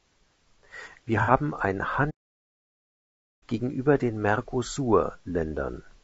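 Throughout the speech, the audio was likely encoded with low-delay AAC compression at a low bitrate, around 32 kbps. At this bitrate the voice is rough and grainy, with noise between the harmonics.

From 1.22 to 1.31 s, AAC frame loss with concealment occurs. About 60 ms of data, consistent with two lost frames, was rebuilt from the previous spectrum, leaving a brief smeared, noisy patch.

From 2.10 to 3.43 s, a playback stall occurs, likely from the player running short of data. The speech cuts off mid-flow and stays silent for about 1.3 s before resuming.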